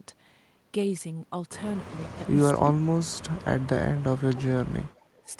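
A speech clip with two faults. An echo leak, likely from a far-end echo canceller missing its loudspeaker pickup, returns a faint copy of the talker about 355 ms late at 1.87–2.27 s, about 25 dB down, and again at 5.04–5.22 s, about 365 ms late and about 35 dB down. Speech suppressed in double talk, likely the canceller ducking both sides while they overlap, drops the voice by around 30 dB at 2.58–3.85 s and around 35 dB at 4.28–5.03 s, with a brief, shallower dip at 5.23–5.29 s.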